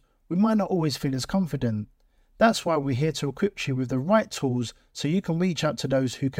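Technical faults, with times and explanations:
No technical faults can be heard in this speech recording.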